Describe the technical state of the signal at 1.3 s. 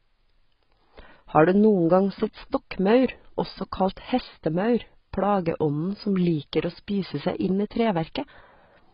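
At 1.3 s you're hearing the same thing that runs through the whole clip: heavy AAC compression damage. Nothing gets through above about 5.4 kHz, so the speech sounds dull and boxed-in, and sibilants come out fizzy and smeared. That's likely a low-bitrate AAC-LC encode; a rate around 16 kbps would fit. At that rate the encoder drops the top of the spectrum and starves the bands it keeps, which leaves that warbly, underwater texture on sustained sounds.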